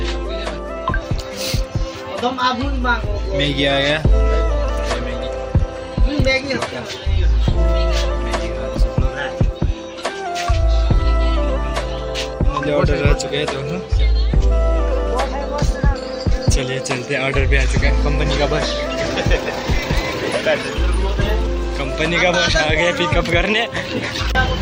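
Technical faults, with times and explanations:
No technical faults can be heard anywhere in this audio.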